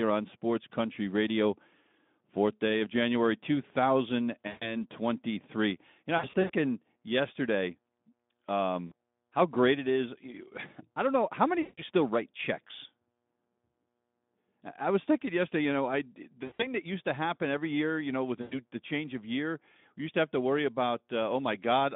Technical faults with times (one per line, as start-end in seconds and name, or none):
4.48-4.75 VoIP packet loss concealed by the speech codec
6.17-6.51 VoIP packet loss concealed by the speech codec
8.88-8.93 VoIP packet loss concealed by the speech codec
11.61-11.83 VoIP packet loss concealed by the speech codec
16.43-16.69 VoIP packet loss concealed by the speech codec
18.41-18.62 VoIP packet loss concealed by the speech codec